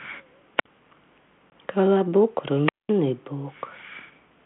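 Speech carried over a narrow telephone band, roughly 150 Hz to 3.4 kHz, with the light graininess of G.726 ADPCM, which fits a 32 kbit/s link. Two wireless microphone squelch dropouts occur. The first runs from 0.56 to 0.66 s, with about 59 ms of muting. The second runs from 2.64 to 2.93 s, muting for about 205 ms. Each time the radio signal from the transmitter fades and hiss swells. The receiver's squelch then cuts the output to near silence until the signal recovers. At 1.50 to 1.53 s there is packet loss on the ADPCM call. About 20 ms of audio, a couple of packets, is replaced by a hard-edged gap of silence. Because ADPCM codes each sample relative to an adaptive prediction, the decoder loses track of the sender. The speech comes back slightly distorted, then settles.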